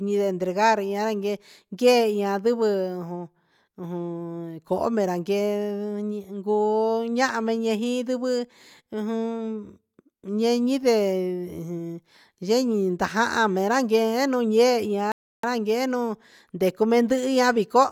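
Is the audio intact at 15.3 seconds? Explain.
No. At 15.3 seconds the speech has dropped out entirely. A Bluetooth stall silences the audio from 15.12 to 15.44 s, a gap of about 0.32 s, before the speech resumes. The likely cause is radio interference delaying packets on the wireless link, so the headphones' playback buffer emptied and output halted until retransmitted data arrived. The result is an abrupt cut to dead silence and then a clean restart.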